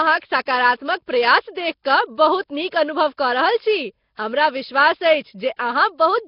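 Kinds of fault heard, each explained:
Nellymoser compression: heavy rough hiss and a smeared, underwater feel throughout, nothing above 5.3 kHz, likely Nellymoser Asao noise-filling starved bands at roughly 22 kbps.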